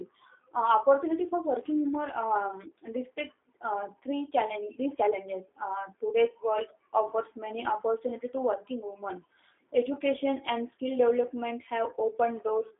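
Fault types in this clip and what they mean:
G.729 codec: speech is rebuilt from a filter-and-pulse model that fits an 8 kbit/s link, so nothing passes above 3.6 kHz and it sounds plainly rough and synthetic.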